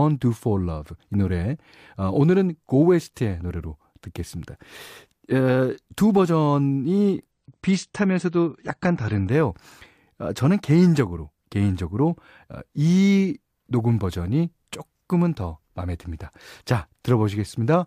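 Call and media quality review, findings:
Adaptive stream at a lower bitrate, 7.31 to 9.31 s. Player dropped to a lower-bitrate rendition for 2 s, which fits a step from around 96 kbit/s down to around 32 kbit/s AAC. Speech loses all content above 9.1 kHz, sounds dull and more artefact-laden, and switches abruptly in and out with no gap in playback.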